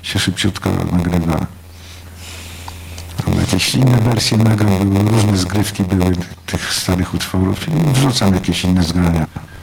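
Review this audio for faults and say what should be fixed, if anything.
A block size mismatch (padded) runs throughout. One stage writes short blocks into 512-sample reads and pads them with zeros. This causes a 93.8 Hz buzz and plays about 6% slow at normal pitch. Match the block sizes of the writing and reading stages.

Frames out of order occur at 7.55 to 7.61 s and 9.25 to 9.48 s. Neighbouring runs of frames play swapped, giving garbled flutter. Sequence frames by timestamp before decoding.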